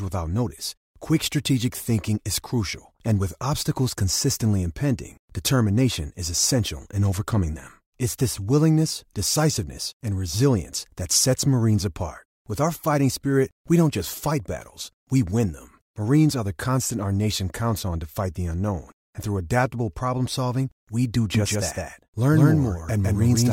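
Speech clip. From 21.35 s, right after "problem solving we do", a doubled audio track appears: an equally loud copy trailing about 150 ms behind, likely from a second, slower capture path.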